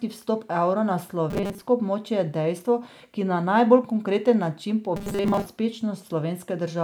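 From 1.30 to 1.65 s, just after "evra na" and before "območje je dejstvo ki", and again from 4.96 to 5.46 s, the speech turns into a rigid metallic buzz at 200 Hz. This robotic sound likely comes from repeated short buffers: a 5 ms slice replayed over and over while most of the real audio is skipped.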